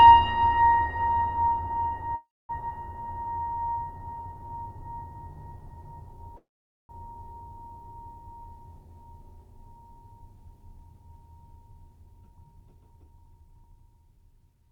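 At 2.15 s the music stops. What sounds like a call audio freeze holds it until 2.51 s. The last sound carries on briefly as a fading buzz, then falls silent for about 230 ms. When playback resumes, the music picks up exactly where it left off. About 336 ms of gap has been inserted and nothing is lost. The likely cause is packets held up in transit, so the jitter buffer ran dry and the receiver had nothing new to play.

Just after, at 2.69 s, comes a skip ahead. The music jumps forward with only a tiny join of a few milliseconds. Roughly 200 ms of the music is gone. The two sides of the cut butt straight together. A stretch was dropped while later audio was already queued, which also took back most of the delay the freeze had added.

From 3.00 s to 4.47 s there is a jitter buffer slow-down. The music plays at about 87% speed, but the pitch stays the same. Sounds are drawn out. The receiver repeated single pitch periods over and over to rebuild its reserve, adding about 205 ms in total.

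At 6.36 s a second call audio freeze begins, lasting until 6.91 s. Again the sound trails off, this time into about 460 ms of silence. The music then resumes without loss. Here 526 ms of gap has been inserted.

From 12.07 s to 14.70 s there is a jitter buffer speed-up. The music runs at about 107% speed at unchanged pitch. The tempo feels pushed and loses its steadiness. The buffer held more audio than its target, so the receiver trimmed short pieces of one or a few pitch periods again and again. Roughly 200 ms was cut in all.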